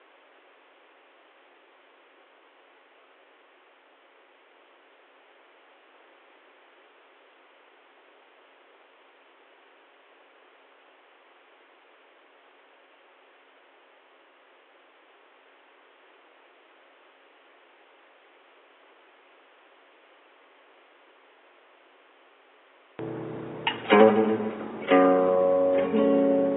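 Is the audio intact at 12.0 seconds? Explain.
Yes, the audio is intact at 12.0 seconds, with no fault present at that moment.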